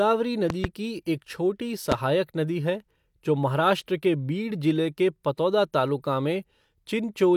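A loud pop strikes twice between 0.50 and 0.67 s. One more pop follows from 1.92 to 1.94 s. Each stands well above the speech, which carries on underneath. The likely cause is a sudden voltage step or pulse from a plug, switch, static or driver glitch.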